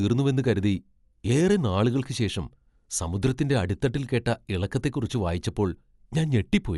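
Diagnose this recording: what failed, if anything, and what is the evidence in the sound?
The fault sits at the codec stage and runs through the whole speech clip. Nothing is present above about 11.6 kHz, so the top end sounds dull. Codec damage is plainly audible, with rough, fluttering noise clinging to the voiced tones. The likely cause is Dolby Digital compression at a low rate, which fits roughly 64 kbps. Starved of bits, the encoder narrowed the band, and many frequency lines got no mantissa data. The decoder filled them with dither noise.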